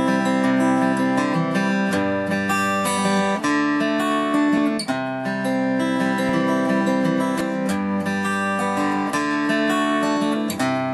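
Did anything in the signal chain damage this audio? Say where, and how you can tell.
Yes. At 4.57 s, 6.29 s and 7.41 s the audio jumps forward with no silence, losing about 20 ms, 20 ms and 70 ms. This is likely a dropped buffer (overrun) at the driver stage: the hardware overwrote samples before they were read, so the surrounding audio joins directly.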